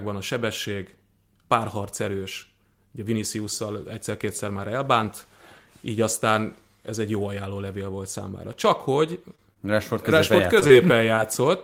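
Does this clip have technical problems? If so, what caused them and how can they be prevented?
Yes. Short concealed packet loss occurs at 9.35–9.40, 9.54–9.58, 10.60–10.63, 10.67–10.71 and 11.15–11.19 s. Each time about 20 ms of speech arrived too late. The decoder extended the previous sound, then blended back, leaving brief smears. A larger jitter buffer or a steadier network connection would prevent this.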